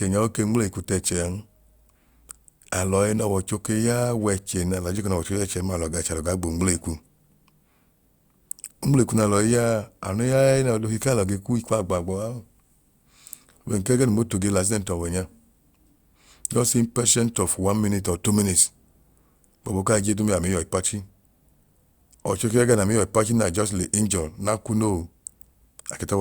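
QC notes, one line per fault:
No faults found in this speech clip. There is nothing to log against it.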